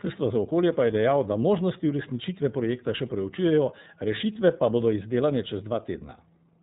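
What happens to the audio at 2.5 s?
At 2.5 s the speech carries the same iLBC codec damage heard through the whole clip: nothing reaches above about 3.8 kHz, and the voice sounds plainly rough and slightly synthetic. The coder rebuilds the excitation of each short frame on its own, which fits 30 ms frames at 13.33 kbps. Unlike a simple low-pass filter, which only dulls the sound, this adds a grainy, artificial texture to the voice itself.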